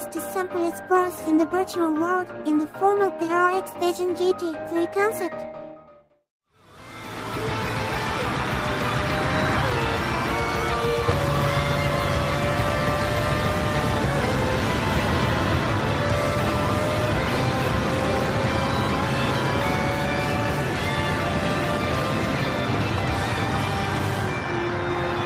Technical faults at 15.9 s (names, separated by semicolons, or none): none